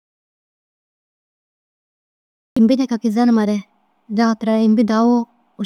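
A speech clip that opens in an audio dropout to silence: from the very start until about 2.57 s there's nothing at all, not even room tone, so it's a true dropout rather than a quiet stretch. Speech then comes in mid-flow with "imbi deki kizenimare". The likely cause is a lost input, from a disconnected device, a dropped link or a stray mute, while the recorder kept writing silence, so whatever came before that entry is gone.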